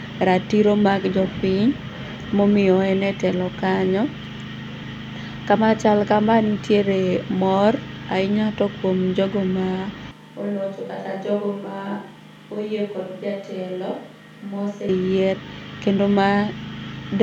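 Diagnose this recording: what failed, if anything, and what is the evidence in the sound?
From 10.11 to 14.89 s the speech abruptly turns roomy and hollow, thins in the bass and drops about 10 dB, with room noise only around 30 dB down. It's likely a switch to a distant microphone at capture after the close mic's feed dropped.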